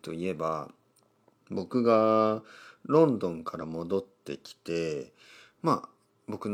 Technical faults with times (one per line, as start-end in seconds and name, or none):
3.58-3.64 damaged data in a compressed stream